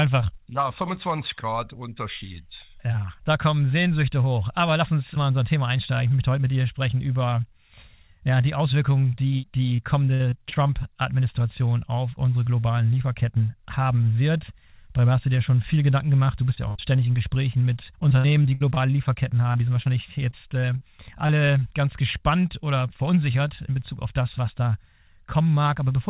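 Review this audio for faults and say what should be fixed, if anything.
Repeated packet loss (robotic sound) occurs at 9.76–10.71 s, 18.00–18.78 s and 19.52–21.31 s. In each stretch the receiver patches hole after hole, each 60 ms or less, by extending the last sound. The result is a choppy texture with pieces missing. It differs from a single burst because the dropouts recur across a long stretch, at most a quarter of it concealed, instead of forming one longer hole.

Short concealed packet loss appears at 16.55–16.59 s and again at 16.77–16.80 s. Each time about 20 ms of audio went missing, and the gap was filled by continuing the preceding sound and then blending back into the real signal. It is heard as a brief smear or wobble. It is separate from the robotic stretches because it is isolated and over in a few hundredths of a second.

A burst of packet loss sits between them at 16.69–16.77 s, where about 60 ms went missing. 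The concealment holds the last sound and fades it, giving a held buzz or fading hiss before the audio resumes further on. It lasts longer than the short losses around it, and the jump in content afterwards sets it apart from repeated loss. All of this passes through a call path with nothing above 4 kHz.

To prevent these faults, stabilise the network link by reducing congestion and jitter, and enable a larger adaptive jitter buffer with forward error correction or redundancy so that lost packets can be recovered rather than concealed.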